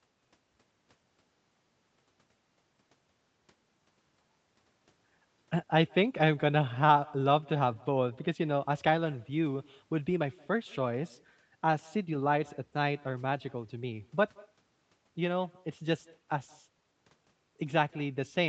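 Throughout, every phrase is trailed by a faint, thin copy arriving roughly 150 ms later, about 28 dB down: echo with no canceller on the far end.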